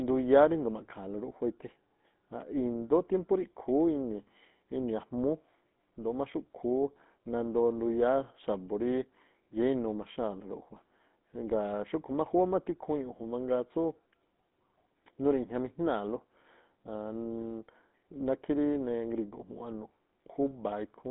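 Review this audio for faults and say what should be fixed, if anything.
The whole clip carries GSM full-rate codec damage. The band runs only from 200 Hz to 3.7 kHz. The speech has a plainly audible buzzy, gravelly roughness. The codec models the vocal tract and rebuilds the excitation from sparse, regular pulses, which fits a 13 kbps GSM full-rate link. To prevent it, record or route the call over a wideband path instead of a GSM full-rate channel.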